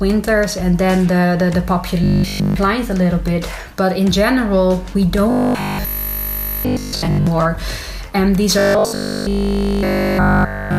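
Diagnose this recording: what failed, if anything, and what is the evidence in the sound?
The buffer stage likely ran dry, so the playback software kept re-playing the same 20 ms block instead of fresh audio. That is robotic sound from repeated short buffers, heard at 2.04 to 2.56 s, 5.31 to 7.27 s, and from 8.59 s to the end. In these stretches essentially all the audio is repeated material, and the 20 ms cycle imposes a steady 50 Hz buzz that makes the sound rigid and metallic.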